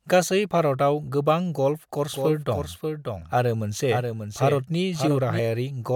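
A second capture path or misaligned edit likely mixed this speech in twice, giving a doubled audio track from 2.13 to 5.39 s, a somewhat quieter full-band copy trailing about half a second behind.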